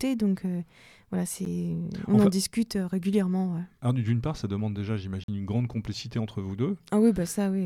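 Blocks of digital silence interrupt this speech recording at 1.45 s and from 5.24 to 5.28 s. Each time, the output buffer was likely not filled in time and the sound dropped straight out with no fade. The roughly 12 ms gap at 1.45 s is heard as a tick, and its length fits a 512-sample buffer. The 46 ms hole at 5.24 s is heard as a short hole, which fits a 2048-sample block.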